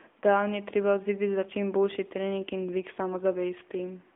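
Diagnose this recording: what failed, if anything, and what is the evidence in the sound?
Thin, boxed-in speech for the whole clip, with nothing below about 250 Hz or above 3.5 kHz and a plainly audible buzzy, synthetic edge on the voice. This is the AMR narrowband mobile codec at the codec stage. The 8 kHz sampling removes all high-frequency content. A vocal-tract model excited by a few pulses per 5 ms subframe rebuilds the voice, and the degree of coarseness heard fits the 10.2 kbps AMR-NB mode.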